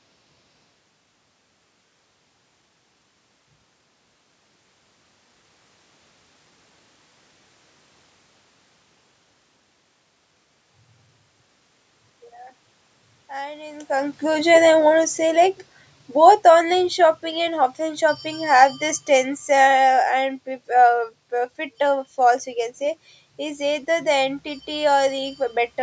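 From 13.31 s to 14.56 s there is automatic gain rising. The gain control judged the input too quiet, around when the talker moved at about 13.5 s, and lifted its gain by about 6 dB. Speech and room noise swell together over roughly a second.

Automatic gain falling follows from 14.51 s to 21.07 s. The gain control, now finding the input too loud, pulls its gain down by about 10 dB. The speech starts loud, then sinks slowly, with the room noise dropping alongside it.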